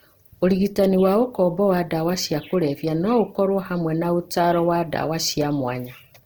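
Opus compression affects the whole of this speech recording, start to finish. The damage is plainly audible: the voice has a rough, grainy, noisy texture. That texture is what the music-oriented CELT mode produces when it runs short of bits and fills bands by folding lower content or injecting noise. The likely cause is a low bitrate, around 16 kbps. Bandwidth still reaches about 20.4 kHz, so the grit is not accompanied by muffling.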